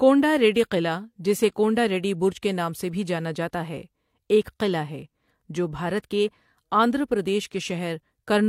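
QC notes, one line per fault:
No faults detected in this clip.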